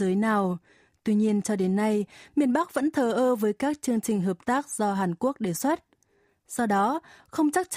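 No technical faults can be heard anywhere in the recording; the speech signal stays continuous and steady throughout, with no audible disturbance at any point.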